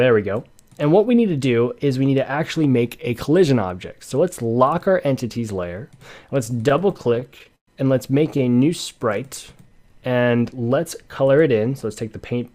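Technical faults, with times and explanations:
6.45–7.69 s, repeated stalls (stutter): packets arrived late, so the jitter buffer ran dry 20 times, the longest gap 115 ms, and the receiver held about 0.3 s of sound (roughly a quarter of this span) by continuing the last audio. Nothing is lost, but the sound drags and judders. A spectrogram shows short horizontal smears of frozen spectrum; the waveform shows repeated cycles, with the longest gap tapering in level.
8.19–8.53 s, repeated stalls (stutter): a shorter run of six gaps, none over 14 ms, filling 54 ms in total. The hiccups are briefer and less obvious. They appear as tiny repeated-cycle patches in the waveform and thin vertical seams in the spectrogram.
8.95–10.82 s, jitter buffer slow-down: to rebuild its reserve, the receiver repeated single pitch periods and bits of pauses, adding 147 ms, so playback runs at 92% speed with unchanged pitch. 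The sound is drawn out. On a spectrogram the harmonics keep their frequencies but the features are stretched sideways. The waveform shows runs of identical repeated periods.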